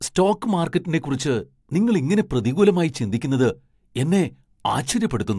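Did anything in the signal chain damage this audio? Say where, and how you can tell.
No, nothing along the chain stands out as having done any damage to this speech, so there's no stage to point at here.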